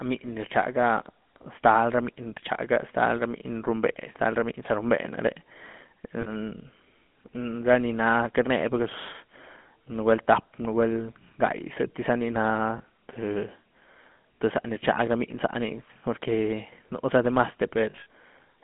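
A buzzy, gravelly roughness runs through the whole clip, and the speech sits in a narrow band from about 150 Hz to 3.4 kHz. This is GSM full-rate codec damage, and its character fits the 13 kbps GSM full-rate coder. That codec rebuilds the voice from a vocal-tract model driven by coarse, regularly spaced pulses, keeping only a thinned-out excitation. It passes nothing above 4 kHz, and the grain is plainly audible on every phrase.

From 6.20 to 6.29 s the speech freezes into a brief rough, metallic ring. This is the first spell of lost GSM frames. The 60 ms gap fits three missing 20 ms frames, each filled by repeating the last good frame's settings. A shorter ring from 12.78 to 12.81 s points to a single lost frame. Near the end, from 17.90 to 18.06 s, the ringing is broken up across 160 ms, with its longest held stretch around 70 ms.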